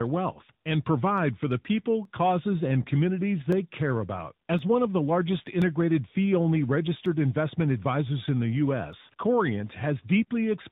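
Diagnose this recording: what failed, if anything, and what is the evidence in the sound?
At the codec stage, this speech shows tandem speech coding: it passed through CVSD, then G.711 mu-law, then AMR-NB at 10.2 kbit/s, so two speech coders ran in series. Each coder re-quantised the last one's errors, giving a rougher, more warbly tone than a single codec would.

Isolated single clicks at 2.05, 3.52, 4.59, 5.62, 7.06 and 8.93 s are likely dropped samples in a driver or buffer, with well under a millisecond missing each time. Unlike packet loss, no sound goes missing; the waveform only jumps, leaving a sharp tick rather than a gap.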